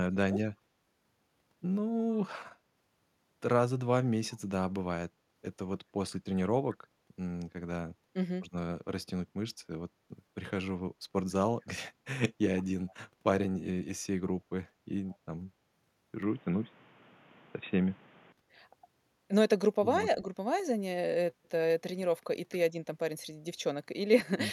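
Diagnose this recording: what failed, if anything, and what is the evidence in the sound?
Call processing: speech suppressed in double talk, the level dipping by roughly 35 dB over about 0.3 s from 0.00 to 0.41 s and by roughly 10 dB around 20.18 to 20.29 s, likely from the echo canceller ducking both talkers.

Call processing: echo leak, a faint delayed copy about 30 to 35 dB down, 153 ms behind the speech, at 6.10, 12.87 and 15.09 s, likely residual loudspeaker echo.

Capture device: input switched to a poorer device from 16.22 to 18.32 s, with a narrower band, a level shift of about 5 dB and new noise floor, likely a headset call profile.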